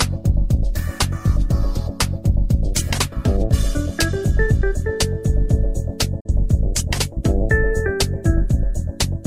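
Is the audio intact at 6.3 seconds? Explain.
No. A digital broadcast dropout runs from 6.2 to 6.30 seconds, ending right at that moment. The receiver muted after a frame failed, fading out over 8 ms. About 43 ms of sound is missing, which points to a single lost frame. Audio then resumes.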